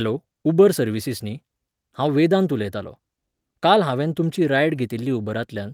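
A lost packet rebuilt from error correction sits at 4.75 to 4.77 s. One packet, about 20 ms of speech, went missing, and the decoder filled the gap with the low-bitrate copy carried in the next packet. There is no gap, but that stretch sounds briefly rougher and noisier.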